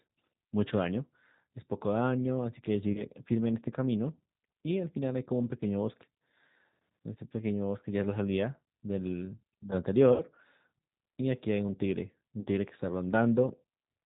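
From the start the whole clip carries the sound of the G.729 codec, and the damage is plainly audible. Everything above 4 kHz is gone, so the speech sounds boxed-in and a bit rough and synthetic. That's what you get when the decoder rebuilds each 10 ms frame from a vocal tract filter, a pitch predictor and a handful of pulses, and it fits the 8 kbit/s G.729A flavour.

At 2.92 s there's the first stretch of VoIP packet loss concealed by the speech codec. About 30 ms of audio is missing, up to 3.03 s, and the decoder fills it by stretching its last pitch and filter state into a short buzzy or noisy smear that fades as the gain drops. The same thing happens again from 10.13 to 10.24 s, the longest gap at around 70 ms, so the fill there decays further. The last one runs from 12.40 to 12.47 s, roughly 50 ms. Each frame is predicted from the one before, so the sound stays weak and off for a moment after packets return.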